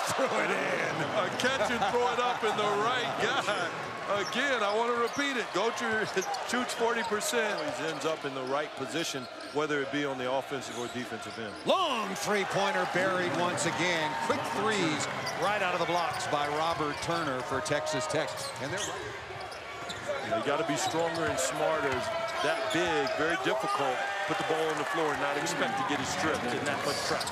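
No technical faults can be heard at any point in the audio, so there are none to describe in time order.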